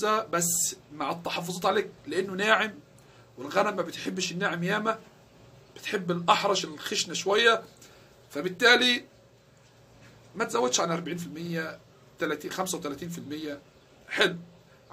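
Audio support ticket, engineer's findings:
Repeated frames at 4.02–4.04 s: quick stutter, one 23.2 ms chunk played twice. Length fits a single compressed frame. Probably the encoder or packetiser writing it twice. Adds 23.2 ms to playback.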